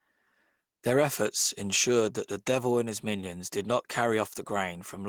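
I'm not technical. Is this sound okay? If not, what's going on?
Yes, nothing stood out as a problem when listening to this recording.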